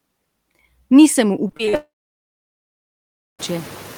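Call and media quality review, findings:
Noise suppressor artifacts, whole clip: background pumps down by about 11 dB between speech and swells back under it. Gain tracks speech activity frame by frame, unlike a fixed filter. The room noise rising by about 19 dB near 2.5 s is genuine background, not this.

Repeated packet loss (robotic sound), 1.47–1.75 s: choppy speech from five short holes, the longest 42 ms. Concealment repeats the last sound, covering about 42% of the stretch. Jitter buffer or transport. Brief, repeated holes with speech between them, unlike one long gap.

Long network dropout, 1.75–3.41 s: the concealment buzz fades, then about 1.5 s of silence before speech resumes, with content lost. Likely a network outage with no packets received. The gap is continuous, not intermittent, so it isn't the robotic chop above.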